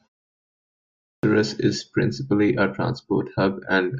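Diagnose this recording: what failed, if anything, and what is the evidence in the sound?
The playback device went idle during the opening 0.75 s of silence and was still waking when the sound resumed, producing a clipped start after a pause. About 0.48 s is swallowed, from 0.75 to 1.23 s, so "is principally a" arrives abruptly, missing its onset.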